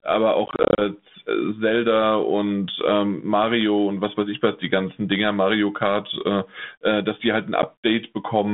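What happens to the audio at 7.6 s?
At 7.62 to 7.64 s there is packet loss on an ADPCM call: about 10 ms of audio, roughly a single packet, drops to silence. The 32 kbit/s G.726 decoder's adaptive predictor and step size then no longer match the sender's, so the speech resumes with mild distortion. On a waveform this appears as a hard-edged flat gap. On a spectrogram it shows as a blank vertical stripe across the 150 Hz to 3.6 kHz band.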